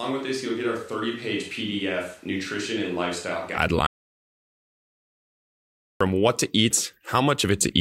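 From the first moment until 3.56 s, the speech sounds roomy and hollow. The bass is thin. The level sits about 5 dB lower than after the change. Background noise is present, though still well below the speech. This points to a switch to a distant microphone. The close microphone was likely not in use, so a farther one picked up more room. At 3.56 s the sound turns close and full abruptly.

At 3.86 s the audio drops out to silence. It stays dead until 6.01 s, a gap of about 2.14 s. Nothing is heard in it, not even room tone. The input was likely lost while recording carried on writing silence. Whatever was said in those two seconds is gone. The speech cuts off mid-flow and then resumes just as suddenly.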